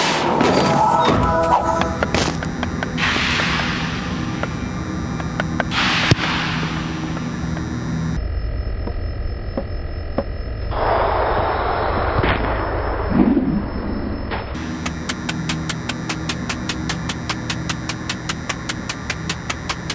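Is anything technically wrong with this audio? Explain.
Yes. From 8.17 to 14.55 s there is a wrong sample rate fault. The audio plays at one-third speed, which fits 48 kHz material run at 16 kHz, so it sounds slow and drops about 19 semitones. A spectrogram would show everything squeezed to a third of its usual frequency and stretched out in time.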